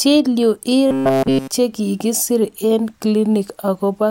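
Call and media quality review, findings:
Robotic sound from repeated short buffers, 0.87 to 1.51 s. Speech collapses into a stiff metallic buzz at 134 Hz, pretty much all of it repeats. Likely cause: playout/jitter buffer starving and looping the last chunk, about 7.5 ms, which fits that pitch. Real audio skipped meanwhile.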